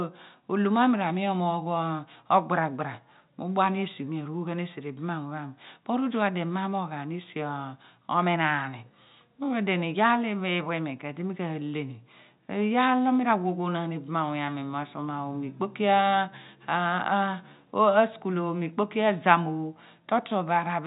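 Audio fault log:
No faults are audible anywhere in the speech.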